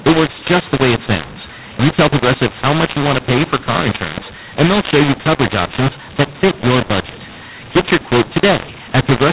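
From the first moment to the last, the speech has that gritty, crunchy edge you get when mu-law and A-law are mixed up: the audio was coded as mu-law but read back as A-law, so every 8-bit value lands on the wrong step of the log curve. Levels come out scrambled, some too loud and others too soft, and the quiet gaps between phrases fill with hiss instead of silence. All of it sits within the usual 4 kHz telephone band of G.711 coding.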